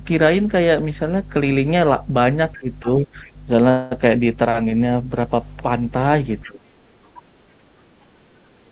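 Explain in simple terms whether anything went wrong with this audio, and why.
A few things went wrong here, so let's go through them.

Under the whole clip there's a steady low mains hum at 50 Hz, and it's fairly loud. That's the power supply getting into the signal, most likely through a ground loop or a transformer sitting close to the cables.

You can also hear the other side's voice leaking through, faintly, in short scraps: 2.52 to 2.57 s, 2.86 to 3.03 s, 3.24 to 3.31 s, 6.42 to 6.51 s and 7.06 to 7.20 s. That's likely the far end's audio coming out of a loudspeaker and not being fully removed by the echo canceller.

Around those same moments the speech gets suppressed in double talk, where the talker's voice dips noticeably from 2.56 to 3.25 s and again from 6.44 to 6.63 s. Both sides were likely talking at once, so the echo canceller couldn't tell them apart and pulled everything down.

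At 3.70 to 3.93 s there's a call audio freeze, about 210 ms where the sound just stretches on instead of moving forward. Packets were likely held up and the buffer ran dry. Then the speech picks up where it stopped, so nothing's lost, just delayed.

The dull top end, with nothing above 4 kHz, comes from the ordinary phone-call codec.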